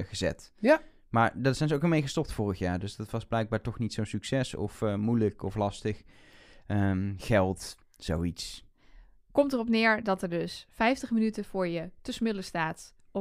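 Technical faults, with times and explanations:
Nothing stood out on listening to this speech recording.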